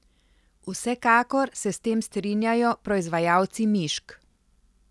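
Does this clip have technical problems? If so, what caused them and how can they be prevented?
No, there are no technical faults in this speech clip. Since nothing went wrong, there is nothing here that needs preventing.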